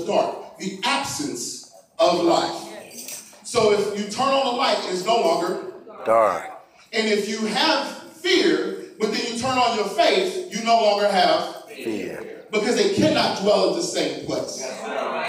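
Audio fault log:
Nothing stood out on listening to this audio.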